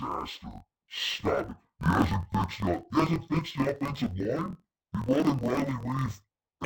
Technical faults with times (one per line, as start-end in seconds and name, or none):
0.00-6.65 interleaved audio read as planar